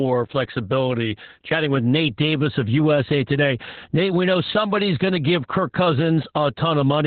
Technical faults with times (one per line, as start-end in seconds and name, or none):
0.00-7.07 Opus voice compression